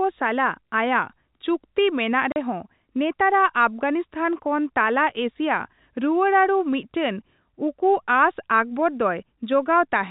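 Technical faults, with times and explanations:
2.32 to 2.36 s, packet loss filled with silence. The speech drops out for 40 ms, a clean hole with abrupt edges. The gap is what a receiver leaves when audio packets never arrive and it plays nothing in their place. The length fits two lost 20 ms packets. Cutting straight to silence and straight back creates sharp discontinuities at each edge. The narrow telephone band of the G.711 coding stays the same on either side of the gap.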